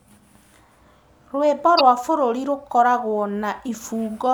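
A speech recording with a short burst of damaged data in a compressed stream, running from about 1.77 to 1.81 s. For those 44 ms the decoder is handed bytes it cannot parse as valid frames, so it misreads or refuses them while it loses sync and hunts for the next frame header.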